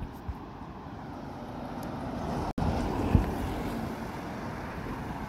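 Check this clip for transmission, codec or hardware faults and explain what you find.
One fault is present: a gap at a join of encoded pieces from 2.51 to 2.58 s. The audio was encoded in separate 4-second pieces and joined untrimmed, so encoder start delay and end padding leave a 68 ms gap, its edges smeared so the silent part is shorter, before the sound resumes where it stopped.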